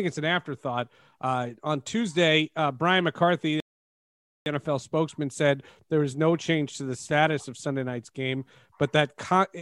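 Speech, with one rebuffering stall from 3.60 to 4.46 s: the player ran dry of downloaded audio, went silent, and picked up exactly where it left off once more data arrived. Nothing's missing, but it adds about 0.86 s of dead air.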